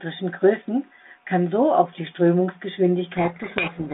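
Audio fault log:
3.12 s to the end, codec payload misread: the speech abruptly disappears under harsh, grinding distortion. The receiving G.726 decoder is unpacking each ADPCM code word with its bits in the wrong order, so most sample differences it rebuilds are wrong.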